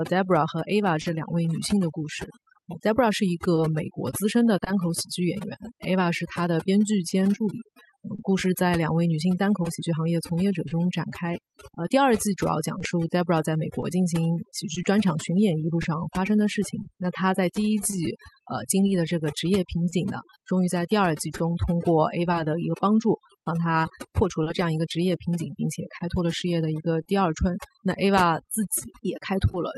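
From the first second to the end, overdone noise removal leaves the background nearly silent apart from twinkling specks. Bands near the noise floor are pushed down so hard that soft parts of the speech vanish with them. This differs from codec artefacts because the damage follows the noise estimate rather than the coding.

Clock drift between sender and receiver runs through the whole clip as well. The sender's clock runs roughly 2 percent slow, so the jitter buffer keeps draining and the receiver repeats or stretches short pieces. Small timing hiccups come back at uneven intervals, and unlike packet loss they reflect a steady rate mismatch rather than missing data.

From 1.01 s to 29.55 s there are scattered short gaps, about thirty of them, none longer than about 30 ms, adding up to around half a second of patched sound. Each hole is filled by continuing the last sound through the Opus call path, which leaves brief ticks or smears. 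Each gap is a single isolated event, not part of the steady drift pattern.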